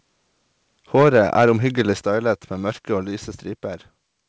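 From 0.97 to 1.53 s the loudest syllables take on a harsh, crackling edge, the sound of microphone overload. Peaks run about 6 dB past the converter's limit, with a small share of samples clipped. On the waveform those peaks appear flat-topped. The spectrogram shows broadband smearing up to the 8 kHz ceiling of the G.722 call path.

At 1.02 s, just after that distortion begins, voice and background together drop about 2 dB. At 2.01 s they drop again, by about 5 dB. This is likely the microphone volume being stepped down by the call software. The waveform envelope shrinks in two abrupt steps, and the spectrogram turns uniformly dimmer after each step.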